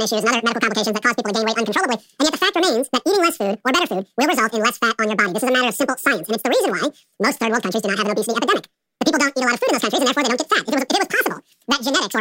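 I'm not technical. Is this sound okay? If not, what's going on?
No. A wrong sample rate affects the whole clip: the speech plays at double speed and a full octave higher, so it sounds squeaky and rushed. That fits audio recorded at about 22 kHz being played back at 44.1 kHz, with nothing adjusting for the difference.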